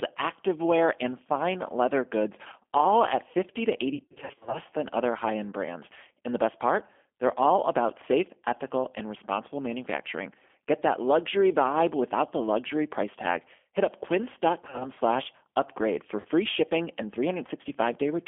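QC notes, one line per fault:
Throughout: G.729 codec. The speech comes through a narrow telephone band of roughly 250 Hz to 3.4 kHz, rebuilt at 8 kbit/s from a vocal tract filter and a few pulses per frame, so it's clearly rough and a bit synthetic, with nothing up top.
3.95 to 4.60 s, 14.63 to 14.91 s, and 16.20 to 16.27 s: VoIP packet loss concealed by the speech codec. Lost frames are patched by stretching the last pitch and filter with a fading gain, so the speech is drawn out into a buzzy tone or coloured noise that fades. The first patch is the worst, about 360 ms missing across 580 ms. The later ones cover about 100 ms and 50 ms, and the sound stays weak briefly after each.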